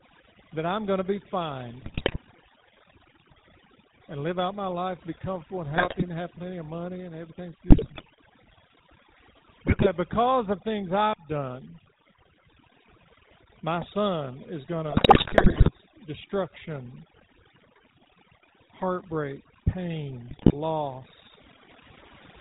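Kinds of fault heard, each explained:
Overdone noise removal, throughout: over-aggressive suppression shuts down bands near the noise floor, leaving near-silent gaps with twinkling specks.
GSM full-rate codec, throughout: a vocal-tract model driven by sparse, regularly spaced pulses, consistent with 13 kbps, nothing above 4 kHz, giving plainly buzzy, gravelly speech.
GSM bit errors, at 1.8–2.21, 5.76–6.04, 7.68–8.05, 9.67–9.87, 14.9–15.7 and 20.28–20.55 s: corrupted filter, pitch or gain values cause squawks, pops and gargling, longest around 15 s.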